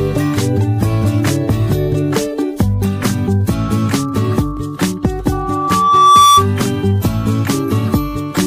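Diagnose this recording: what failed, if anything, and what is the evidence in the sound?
Loudspeaker feedback squeal from 5.32 to 6.47 s, in the analogue acoustic path: a single 1.2 kHz tone swells over roughly a second to about 10 dB above the sound. The microphone hears its own loudspeaker, and loop gain above one at 1.2 kHz makes that frequency grow until the loop is broken.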